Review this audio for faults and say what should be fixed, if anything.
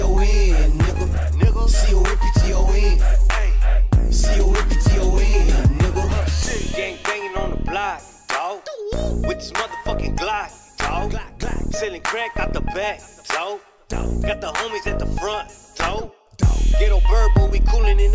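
Nothing needs fixing, because the signal stays steady and intact throughout, with no technical problem audible at any point.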